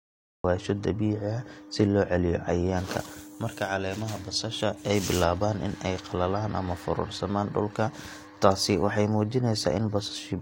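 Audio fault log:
0.00 to 0.44 s, cut-off start: capture or the stream came up late, so the file holds digital silence for the first 0.44 s and then the speech switches on in the middle of a sound rather than at its beginning. Because the opening of that sound was never recorded, there is no natural onset or fade-in. At 0.44 s the signal jumps straight from nothing to full level, and the first syllable sounds clipped off at the front.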